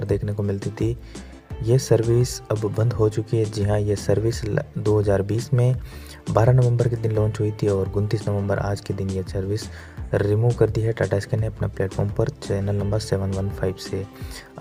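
No technical faults are audible anywhere in the recording.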